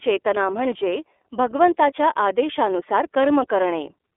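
From start to end the speech sounds thin, boxed-in and slightly buzzy, with a rough, synthetic edge that is plainly audible. This is the iLBC codec: the audio is confined to a telephone line band of roughly 300 Hz to 3.5 kHz, and each 30 ms frame's excitation is coded independently of the previous one, which fits the 13.33 kbps mode. That coarse, frame-by-frame modelling produces the grainy, artificial quality.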